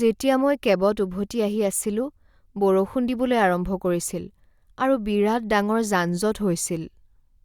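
Nothing stood out on listening to this speech recording.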